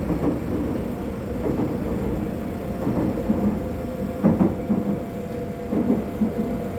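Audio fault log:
No faults detected anywhere in the audio.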